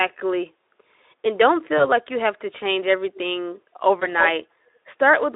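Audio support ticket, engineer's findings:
VoIP packet loss concealed by the speech codec, 1.77–1.87 s and 4.00–4.08 s. Symptom: brief buzzy, smeared stretch that fades, then a weak, distorted restart. Each gap is consistent with one lost 20 ms frame. Decoder repeats last pitch and filter at falling gain, and later frames inherit the error, so recovery takes the rest of each window. Spectrogram: harmonics freeze flat, then dim. Waveform: periodic cycles with decaying envelope.

Echo leak, 3.15–3.19 s, 4.19–4.30 s and 5.22–5.30 s. Symptom: delayed copy of earlier speech, about 383 ms behind at 3.15 s and 338 ms behind at 4.19 s and 5.22 s. Faint at 3.15 s, nearly as loud as the direct speech at 4.19 s, barely audible at 5.22 s. Likely a far-end loudspeaker path that the echo canceller did not fully cancel. Spectrogram: ghost harmonic pattern repeating earlier speech, shifted right by about a third of a second, confined to the 300 Hz–3.7 kHz Speex line band.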